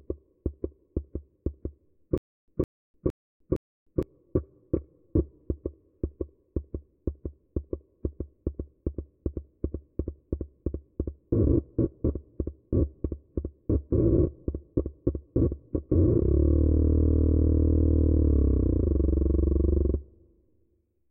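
From about 2.18 s to 4.03 s there's a stutter with silent gaps. The same short fragment of about 160 ms plays four times, each followed by roughly 300 ms of dead digital silence, so it ticks along at a steady 462 ms cycle. The likely cause is a stalled player or stream that replayed its last chunk on each retry and then ran dry. Whatever should have played across that stretch is simply gone.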